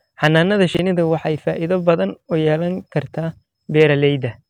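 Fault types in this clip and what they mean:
Hard clipping: peaks in the speech exceed what a stage in the chain can pass, so the waveform tops are sheared flat and high harmonics are added. It happens three times. The worst is from 0.24 to 0.39 s, overdriven by about 4 dB, giving a short harsh crackle. At 3.80 to 3.83 s the overload is about 2 dB and sounds as a brief rasp. At 1.89 s the peak only just reaches the limit.
Chunks out of order: between 0.75 and 0.79 s a block of about 21 ms arrives one chunk late and is played after the block that should follow it. No audio is dropped, but the sequence is scrambled, and there are three hard joins where the blocks meet. The moment is heard as a tiny stutter or jumble in the speech.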